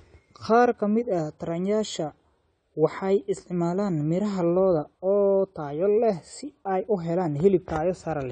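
Speech, and the whole thing carries clear AAC compression damage: there's nothing above about 9 kHz, so it sounds dull, with a smeared, warbly fizz on the sibilants. That's likely AAC-LC squeezed hard, which fits a low bitrate around 32 kbps.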